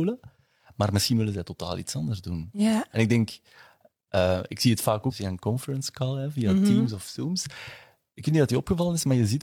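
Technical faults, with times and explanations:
5.07 to 5.13 s, stream segment skipped: The speech jumps abruptly ahead, with a brief blip at the join. A piece of the programme is simply gone. The likely cause is one segment of a segmented stream failing to load, so the player carried on with the next.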